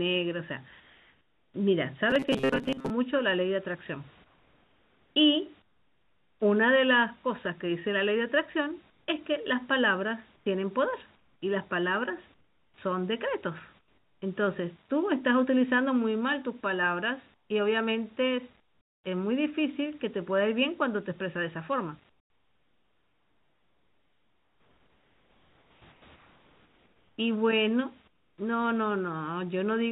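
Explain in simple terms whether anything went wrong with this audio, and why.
Twice early on and three more times later, the background in the pauses turns into a flat, even hiss with none of the room's real texture: at 0.8 to 1.54 s (slightly quieter than the true background), 4.24 to 6.4 s, 8.9 to 14.22 s, 17.34 to 19.04 s and 22.1 to 28.38 s. This is comfort noise in place of the background. The likely cause is that the sending side stopped transmitting while it detected no speech, and the receiving end filled each gap with synthetic noise shaped only roughly like the room.

From 2.10 to 2.90 s the voice goes stiff and metallic, with a steady buzz around 133 Hz riding under it. This is robotic sound from repeated short buffers. Audio was likely arriving too slowly, so the receiver kept replaying a tiny slice of about 7.5 ms, which sets that fixed buzz pitch, while roughly half of the real sound in that stretch was skipped. 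The whole clip also has the narrow, phone-like sound of a standard call codec.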